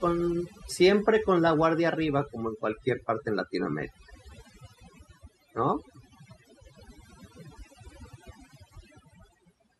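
From start to finish the background between phrases drops to near silence dotted with twinkling specks. This is overdone noise removal: a noise reduction stage was set far too aggressively on a noisy recording, so it pulled individual frequency bands down or out whenever they came close to its noise estimate. The softer components of the voice sat in that range and were stripped away along with the noise.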